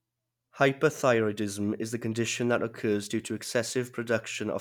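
No audible technical faults.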